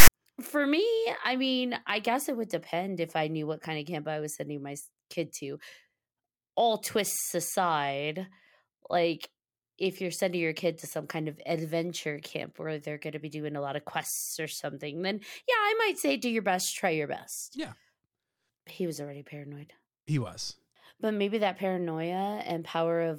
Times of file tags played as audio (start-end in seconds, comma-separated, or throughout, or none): 0.00-0.09